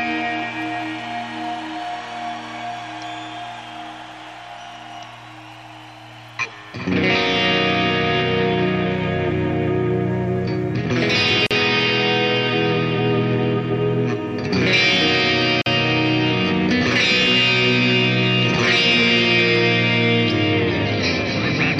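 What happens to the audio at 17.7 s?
Nothing goes wrong at 17.7 s; the audio carries on intact through that point with no break, click, dropout or other fault.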